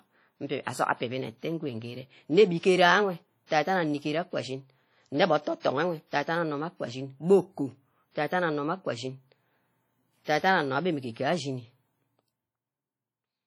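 WMA compression, throughout: the speech carries heavy codec damage, with a ringing, washy quality and hiss that swells and fades with the signal. This likely comes from a simple transform encoder at a low bitrate, around 32 kbps, spreading quantisation noise across long blocks and dropping weak components.

Pre-echo, at 3.46 to 3.51 s (44 ms), 5.60 to 5.65 s (46 ms) and 10.24 to 10.27 s (32 ms): a short hiss runs ahead of each sharp attack, softening it. The block's noise, sized for the loud onset, also fills the quiet moment before it.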